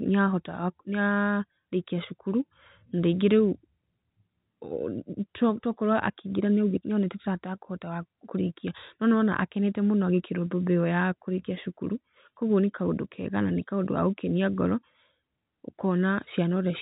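No technical faults occur at any point in the speech, which carries the narrow 4 kHz band of ordinary G.711 telephone coding.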